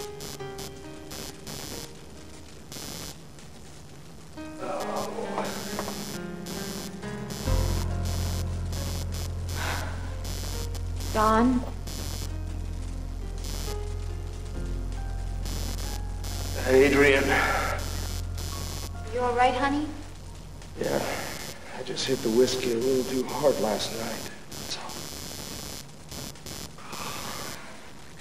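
Computer activity noise runs through the whole recording, from 0 s to the end at about 28 s. It is a buzzing, chirping pulse train repeating at roughly 150 Hz, sitting around 10 dB below the wanted sound, and it rises and falls with the computer's workload rather than with the audio. As the processor, graphics card or mouse draw changing current, the ground shared with the audio circuitry shifts, and those shifts are picked up as this activity-tracking noise.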